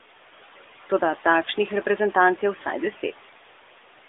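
Speech on a narrowband mobile line (roughly 300 Hz to 3.6 kHz) has noise suppressor artifacts throughout: steady-noise bands are cut by about 12 dB frame by frame, so room noise dips between phrases and rises back under the voice.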